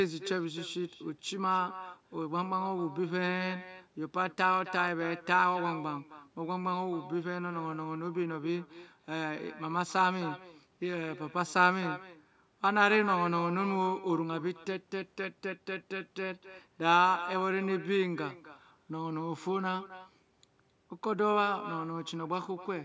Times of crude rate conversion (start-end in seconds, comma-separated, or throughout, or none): none